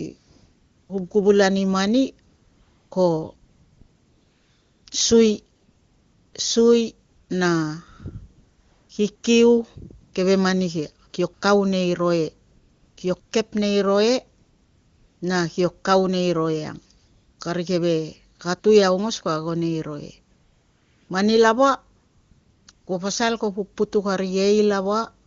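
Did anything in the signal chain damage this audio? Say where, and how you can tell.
Yes. AMR comfort noise from discontinuous transmission in the codec stage: in about twenty pauses between 0.17 s and 25.25 s, lasting from 16 ms up to 1.5 s (longest 3.35 to 4.85 s), the real background switches to smooth synthetic hiss. The sender stopped coding speech frames, and the receiver generated noise from a coarse level-and-spectrum description.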